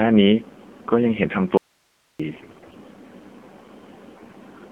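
Throughout, the speech sounds buzzy, thin and synthetic, confined to a 200 Hz to 3.4 kHz band with nothing above 4 kHz. That is the AMR narrowband mobile codec, rebuilding each frame from a vocal-tract model and a few pulses, at a coarseness that fits its 7.4 kbps mode.

From 1.57 to 2.20 s the speech cuts out abruptly for 0.62 s, leaving only hiss about 45 dB below the signal. This is an audio dropout to a faint residue. The wanted signal was likely lost upstream while the path after the break stayed live and passed its own noise.

From 2.30 to 2.77 s the speech keeps roughly its pitch and level but turns hoarse, scratchy and gargly. These are AMR bit errors. Flipped, less-protected bits misplaced the excitation pulses and skewed the gain and spectral values, across a span that fits about 23 damaged 20 ms frames.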